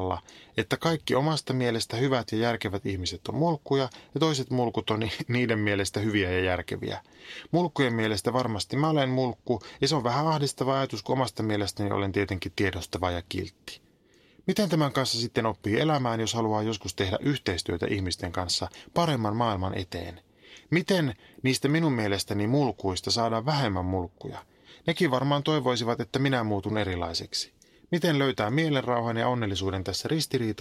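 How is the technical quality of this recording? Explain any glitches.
No glitches turn up anywhere in this speech recording, so there is nothing to explain.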